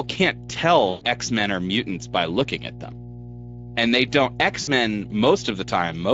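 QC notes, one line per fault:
Throughout, mains hum. A steady low tone at 60 Hz sits under the speech at about 15 dB below it. A ground loop or a nearby transformer lets the power line leak into the signal path. Because the coupling never stops, the tone holds a fixed pitch and level. It does not follow the speech. Some low harmonics thicken it.
Throughout, Speex codec. The speech sounds rough, hoarse and noisy, and the codec damage is plainly audible. The character points to a middle Speex setting, around 17 kbps. That leaves the CELP coder few bits to describe the excitation, so voicing loses its clean periodic quality and picks up a grainy edge. Any content above 4 kHz is only a shaped noise fill.
0.89 to 1.06 s and 4.61 to 4.70 s, VoIP packet loss concealed by the speech codec. The first gap lasts about 120 ms, which fits six lost 20 ms frames. The second, right after "they don't", lasts about 60 ms, which fits three frames. 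In each gap the decoder repeats its last pitch and filter at falling gain. The sound smears into a fading buzz or coloured noise, and the speech stays weak for a moment after each gap.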